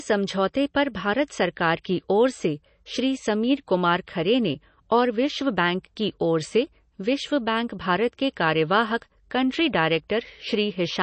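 From start to finish the speech carries plainly audible MP3 compression damage. Nothing is present above about 8.3 kHz, so the treble stops at a hard ceiling, and s sounds lose their bite. The remaining band has a watery, swirling quality with metallic chirps on sibilants, as weak frequency lines drop in and out between frames. The likely cause is a low-bitrate MP3 encode, which fits roughly 32 kbps, where the encoder runs short of bits and discards detail it judges inaudible.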